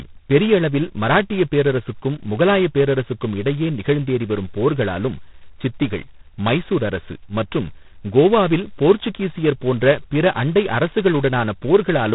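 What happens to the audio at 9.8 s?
At 9.8 s you're hearing G.726 ADPCM, present across the whole clip. The heavy rasping hiss tracking the speech suggests 16 kbit/s, with nothing above 3.9 kHz.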